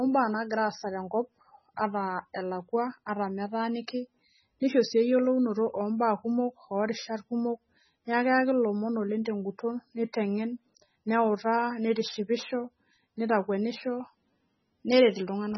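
Speech throughout, with the top end missing above 5.9 kHz and a watery, swirling texture on every phrase; s sounds turn into metallic chirps and consonant attacks smear. The likely cause is heavy MP3 compression, consistent with a very low bitrate around 16 kbps, where the encoder discards treble and switches weak frequency lines on and off between frames. A spectrogram would show a hard ceiling at 5.9 kHz and patchy, blocky holes below it.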